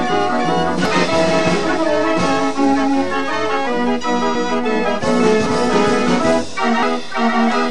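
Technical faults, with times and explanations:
0.85, 4.35, 5.46 and 6.83 s, dropped buffer (overrun): likely the program fell behind and unread samples were overwritten. Roughly a tenth of a second vanishes at 0.85 and 4.35 s (nearer a third at 5.46 s, about 0.15 s at 6.83 s) and the edges join directly, giving an abrupt skip with no silence.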